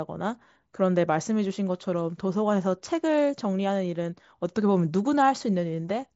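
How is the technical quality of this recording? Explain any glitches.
No glitches to report: the speech comes through a Bluetooth mSBC headset link working as intended, with nothing above about 7.7 kHz as that wideband path allows.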